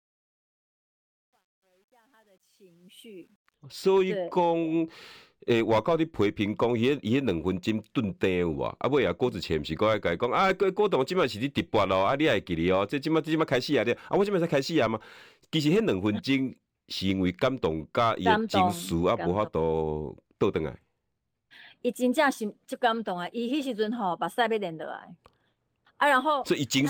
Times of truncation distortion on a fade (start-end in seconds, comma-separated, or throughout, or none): 0.00-3.54